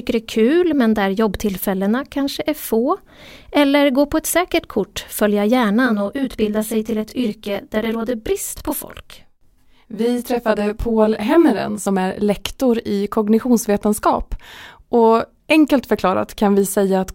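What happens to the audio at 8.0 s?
Channel delay (comb filtering) covers 8.0 s, running from 5.86 to 11.86 s, between "ett säkert kort följa" and "är lektor i kognitionsvetenskap". One channel lags the other by around 20 ms before the mono sum, so fixed notches from around 20 Hz upward make the speech sound rough or slightly doubled.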